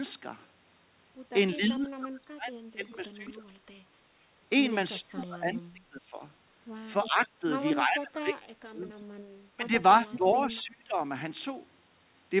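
From 1.55 to 3.46 s the speech dips by roughly 25 dB in broken pieces, likely speech suppressed in double talk: an echo canceller, faced with both sides at once, turned down the near talker along with the echo. Unlike a dropout, the level recovers as soon as the far side stops. At 2.90–2.96 s a faint echo leak appears, a scrap of the voice about 25 dB down and 325 ms late. It is a delayed copy, not a loss. It repeats at 4.96–5.00 s, again about 25 dB down. The suppression returns at 5.01–6.2 s, also roughly 25 dB deep. At 7.04–7.09 s the echo rises to about 15 dB below the speech, and then at 7.06–8.9 s the deepest suppression, near 30 dB, chops the speech. The suppression comes back at 9.54–10.99 s, about 20 dB deep. Within it, at 10.12–10.58 s, the longest and loudest echo runs about 10 dB below the speech, still 325 ms behind. All of this is heard through a telephone-band path with nothing above 4 kHz, which fits a G.711 A-law codec at 64 kbps.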